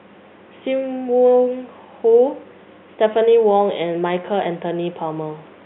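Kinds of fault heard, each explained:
No faults are heard.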